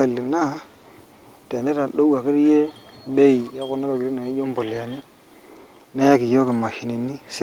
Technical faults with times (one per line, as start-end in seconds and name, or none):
0.65-0.93 echo leak
5.03-5.34 echo leak